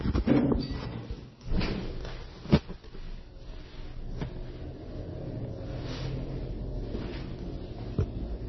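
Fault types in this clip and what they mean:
MP3 compression: Nothing is left above 5.9 kHz, so the treble stops dead throughout. Weak detail flickers in and out between frames, giving a heavy watery, swirling texture. Attacks smear. This likely comes from MP3 encoding at a very low bitrate, around 24 kbps.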